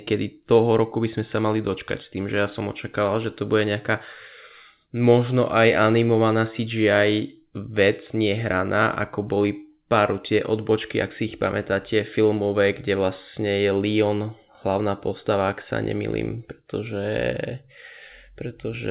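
Nothing stood out on listening to this speech clip, which came through a call path whose telephone-band codec leaves nothing above 4 kHz.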